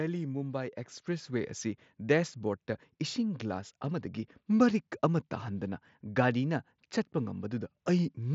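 At 1.02 s the microphone volume steps up. The level rises by about 6 dB in a single jump, not a gradual ramp. This is the pattern of call software judging the microphone too quiet and raising the device's input volume in one move. Speech and background noise jump together, since both pass through the same raised input stage. The sound carries on louder from that point. The Bluetooth mSBC headset link keeps everything below about 7.7 kHz throughout.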